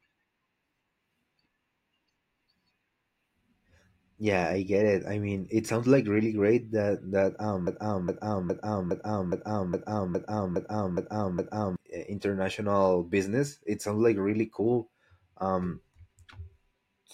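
From 7.67 s to 11.76 s, the speech catches on a single 0.41 s fragment and plays it ten times in a row, each copy identical and butted tightly against the next, like a stuck needle. This broken-record loop likely comes from the player, encoder or stream stalling and resending the last chunk it held. Whatever should have been heard during those four seconds never arrives, and normal playback resumes only once the loop breaks.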